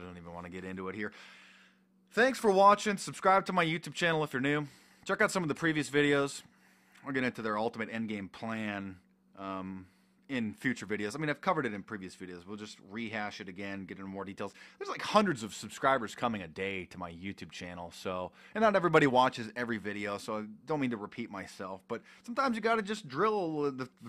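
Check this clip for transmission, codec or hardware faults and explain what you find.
Nothing here points to a transmission, codec or hardware problem; the audio holds together steadily all the way along.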